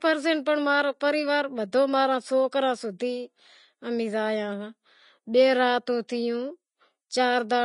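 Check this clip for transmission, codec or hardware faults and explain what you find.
There is one fault, present throughout the speech. It is Vorbis compression, likely at a low bitrate near 30 kbps. Nothing is left above 10.6 kHz. Coarsely quantised treble turns to grainy hiss, roughening tones and blurring attacks.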